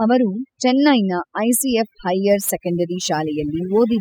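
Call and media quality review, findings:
Overdone noise removal, whole clip. Background pulled to near silence with twinkling specks. Probable component: noise suppressor set too aggressive. Bands near its noise estimate are cut hard or muted, and quiet speech detail goes with them.

Sample clock jitter, 2.29 s to end. Added hiss and roughness riding on the speech, strongest on loud and bright sounds, absent in pauses. Probable component: converter clock. Timing wobble of a couple of microseconds. Error roughly 30 dB below the signal, scaling with waveform slope.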